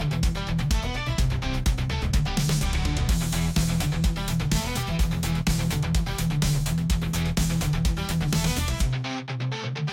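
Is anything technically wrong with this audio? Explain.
No, nothing technically wrong can be heard in this audio, and the signal comes through without any audible defects.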